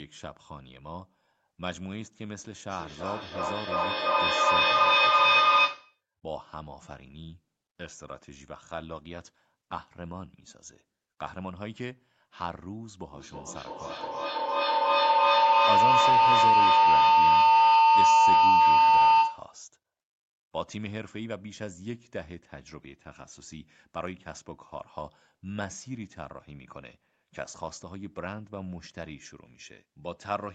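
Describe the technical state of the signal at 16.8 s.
At 16.8 s the signal is inside a feedback howl running from 13.12 to 19.58 s. Two devices share one room, so the loop keeps gaining level. A tone near 1 kHz swells, with repeats about every 300 ms, peaking about 16 dB above the speech.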